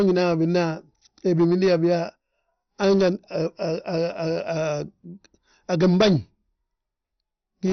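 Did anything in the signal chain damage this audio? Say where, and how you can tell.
Yes. From start to finish the speech sounds dull and muffled, with a gurgling, granular texture and nothing above about 6.2 kHz. That points to the codec stage, most likely MP2 compression at a low rate, consistent with roughly 48 kbps. Layer II divides the spectrum into 32 sub-bands and shares out bits among them. Starved of bits, it drops the upper bands entirely, switches bands on and off so they flicker, and quantises the remaining ones coarsely.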